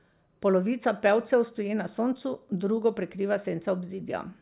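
No faults can be heard anywhere in this speech recording.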